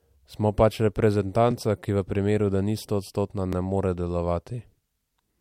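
Overlapping chunks: the speech was handled in 2-second blocks, each starting about 13 ms before the previous one ended, so that sliver plays twice. At 1.51 s, just before "ki v primeru da", and at 3.53 s, between "primeru da ni stoodstotna" and "ne more", a brief click-like stutter results.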